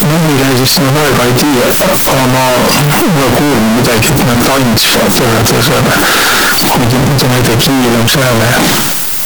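Float read as integer runs throughout the speech. The 32-bit float samples were likely read as 32-bit integers, so sign and exponent bits dictate level, leaving a near-square wave at an almost fixed, high level: very loud, harsh, with background noise as loud as speech, though pitch stays traceable.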